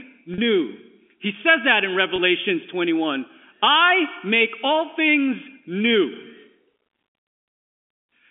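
Speech over a telephone line, band-limited to about 250 Hz to 3.4 kHz. Packet loss with pitch repetition occurs twice, at 0.34 to 0.38 s and 2.16 to 2.18 s. Each gap sounds like a brief held, buzzy note. The receiver repeats the last pitch period to cover the missing audio. The 40 ms and 20 ms gaps fit two lost packets and one lost packet.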